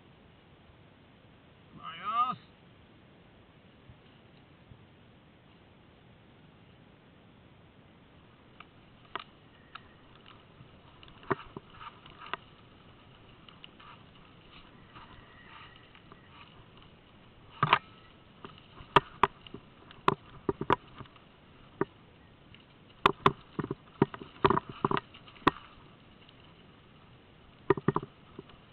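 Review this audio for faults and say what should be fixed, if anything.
Nothing stood out on listening, so there is nothing here that needs fixing.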